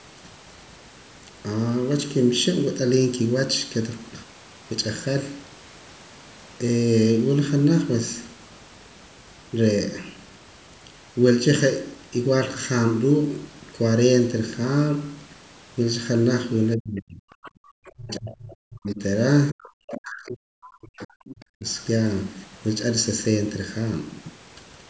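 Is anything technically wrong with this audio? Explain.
Yes. The speech has a fixed comb-filter colouring throughout, and between about 16.8 and 21.7 s it shows several echo-canceller faults.

Channel delay (comb filtering) runs through the whole clip. One channel arrives less than a millisecond behind the other, and the two are summed to mono. Components common to both channels cancel where the offset equals half a period. The first notch sits around 700 Hz, with further notches at odd multiples of that frequency. The speech sounds hollow and phasey, with fixed notches that never move.

Speech suppressed in double talk occurs at 16.77–17.26 s, 17.89–19.01 s and 19.51–21.65 s. The affected time is roughly half a second in the first span, about one second in the second and about two seconds in the third. In each span the talker's level falls by as much as about 40 dB, so the voice dips. 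The likely cause is the echo canceller treating simultaneous talk from both ends as echo and attenuating the near talker along with it.

The other side's voice leaking through appears briefly at 17.43–17.51 s and again at 17.86–17.92 s. These are short scraps of a second voice about 25 dB and about 30 dB below the main speech, respectively. The far-end audio, played from the loudspeaker, likely reaches the microphone and is not fully removed.

Background gated by the echo canceller occurs at 17.54–17.61 s. For about 70 ms the room tone drops by about 27 dB and then returns. This happens because the canceller clamped the microphone hard while the loudspeaker was active and then released it. The result is a momentary hole in the ambience, heard as a brief drop between the surrounding leak fragments. The call microphone processing's band limit, with nothing above 8 kHz, is separate from these faults.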